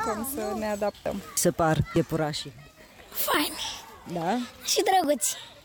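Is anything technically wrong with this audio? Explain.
Yes. At 1.06, 1.96, 3.34 and 5.04 s the audio jumps forward with no gap, losing roughly 40 ms at the first two points and about 10 ms at the last two. This is likely a dropped buffer (overrun), where unread samples were overwritten and the remaining audio was spliced together.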